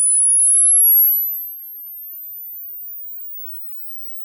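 From 1.01 to 1.59 s, the level drops by roughly 25 dB with zipper noise. The fade is applied in coarse steps, about a hundred per second, with no smoothing. Each step clicks. The result is a fast ticking buzz riding on the sound.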